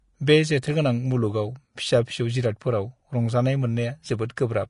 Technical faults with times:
0.00-4.69 Vorbis compression
4.29 pre-echo

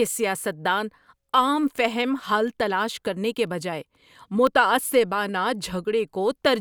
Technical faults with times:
2.48-4.47 periodic USB or driver dropouts

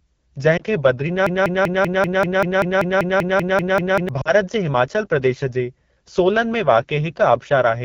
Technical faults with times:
0.00-7.84 AMR wideband (HD Voice) codec
0.57-0.64 lost AMR speech frames
1.26-4.09 broken-record loop
4.21-4.32 lost AMR speech frames

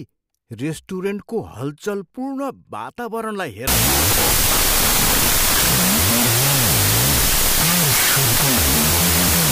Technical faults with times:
3.67-9.52 wrong sample width

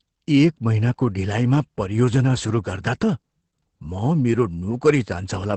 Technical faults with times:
0.00-5.57 Opus voice compression

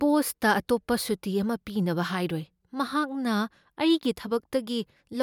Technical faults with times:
none

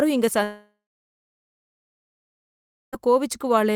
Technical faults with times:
0.43-2.94 long network dropout

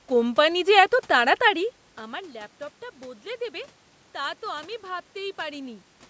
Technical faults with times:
none

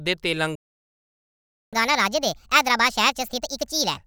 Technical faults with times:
0.55-1.73 playback stall
1.73-3.97 catch-up at higher speed

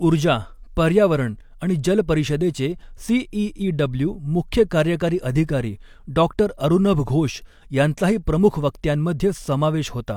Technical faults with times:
none

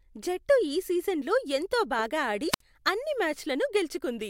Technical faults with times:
2.50-2.61 wireless microphone squelch dropout

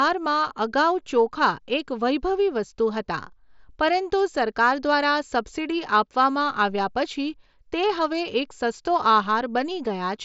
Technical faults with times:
none

